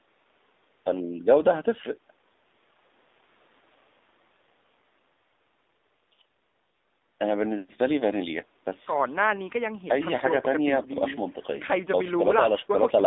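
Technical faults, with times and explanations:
throughout, AMR narrowband mobile codec: the speech was carried by a narrowband mobile codec that rebuilds each 20 ms frame from a vocal-tract model and a few pulses, passing only 250 Hz to 3.7 kHz. It sounds thin, boxy and plainly buzzy, which fits a low bitrate near 7.4 kbps.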